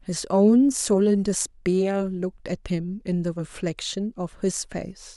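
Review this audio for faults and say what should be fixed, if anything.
No faults can be heard in this speech recording. Nothing needs to be fixed.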